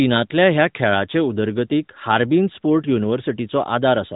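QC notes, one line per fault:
Nothing to flag on this one; the speech simply carries the usual narrow, phone-like character of the AMR narrowband mobile codec, with nothing above 4 kHz.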